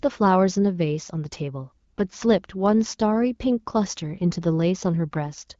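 No technical faults are audible.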